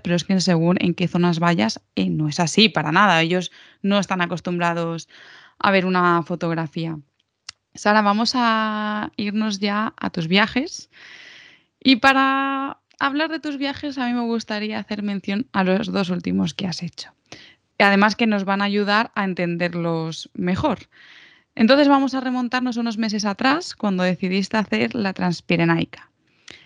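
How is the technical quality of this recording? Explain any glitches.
The speech recording has no audible technical faults, and the signal holds steady and unbroken throughout, so there are no glitches to explain.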